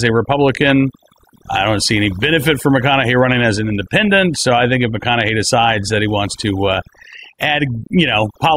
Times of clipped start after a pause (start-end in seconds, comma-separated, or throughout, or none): none